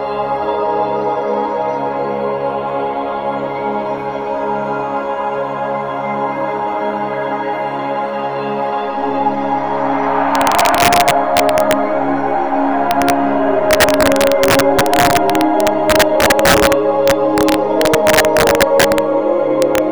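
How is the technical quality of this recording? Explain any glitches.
Integer overflow cracks mar the second half: 10.35–11.73 s, 12.91–13.10 s, 13.71–16.73 s, 17.08–18.98 s and 19.62–19.78 s. The gain pushed peaks about 4 dB (about 1 dB in the shorter bursts) past the integer limit, so they wrapped to the opposite sign, giving harsh snaps far sharper than clipping.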